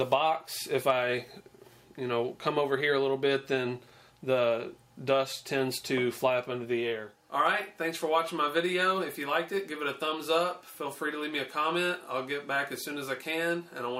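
No technical faults are audible.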